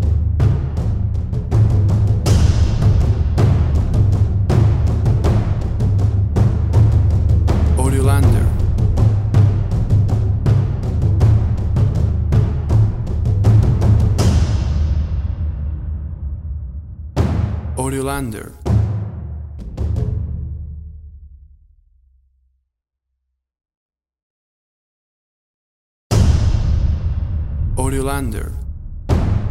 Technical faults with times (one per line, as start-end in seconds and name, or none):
none